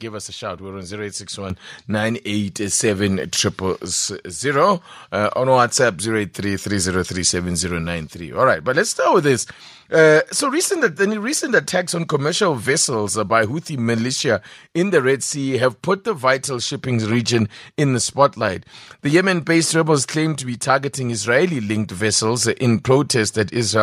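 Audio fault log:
1.50 s, microphone volume stepped up: the call software judged the microphone too quiet and raised the device's input gain in a single step of about 8 dB, so the speech and the background noise jump louder together. On the waveform the envelope widens abruptly; a spectrogram brightens across all frequencies at once.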